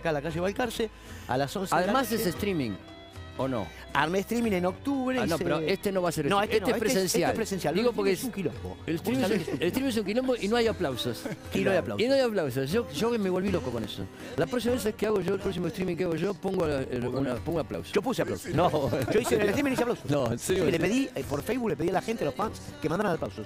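From 13.36 s to 23.38 s there are periodic USB or driver dropouts: a few milliseconds skipped every 0.06 s, giving a steady ticking over the sound.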